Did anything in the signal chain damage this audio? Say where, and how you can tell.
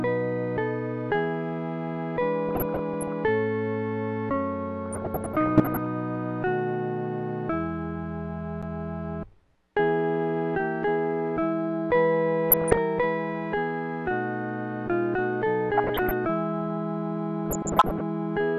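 Yes. Weak DAB reception let bit errors past error correction into the MP2 data, so wrong samples put short noise blips into single sub-bands: DAB burbling at 2.49–3.13, 4.86–5.86, 12.51–12.78, 15.77–16.11 and 17.46–18.01 s.

A CD skip sent the laser to another spiral turn. At 8.62 s there is a mute of a few milliseconds, and a jump.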